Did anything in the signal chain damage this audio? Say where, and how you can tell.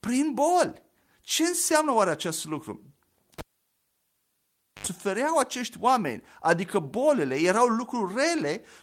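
Yes. At 3.39 s a pop cuts the speech into near silence for about 1.43 s, then a 76 ms burst of 50 Hz buzz and a second pop bring it back at 4.87 s, just before "acești oameni adică". This is a cable pulled and plugged in at the analogue wiring stage. The buzz comes from the plug tip touching the socket alone and picking up mains hum.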